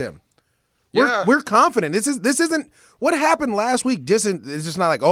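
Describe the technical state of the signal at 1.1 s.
At 1.1 s the speech signal is intact, with no dropout, clipping, glitch or other audible fault at that point.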